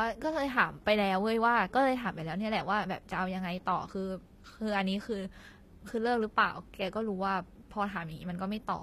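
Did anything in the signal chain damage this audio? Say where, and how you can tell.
Yes: throughout, the speech's s sounds turn gritty and metallic, with nothing above 14.9 kHz. This is likely HE-AAC compression at the codec stage, consistent with about 24 kbps, rebuilding treble by band replication.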